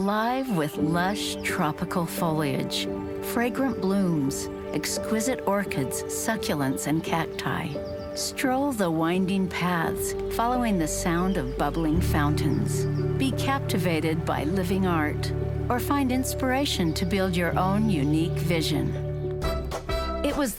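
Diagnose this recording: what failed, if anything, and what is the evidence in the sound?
Nothing stood out on listening that would point to a failure at any stage of the chain.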